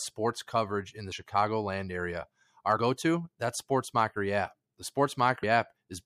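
At 1.11, 2.76 and 5.42 s, compressed frames are skipped: about two, two and then three 26.1 ms frames never decode, so the speech jumps ahead roughly 50, 50 and 70 ms. Each join is a brief smeared blip, seen as a short vertical discontinuity in the spectrogram and a waveform splice.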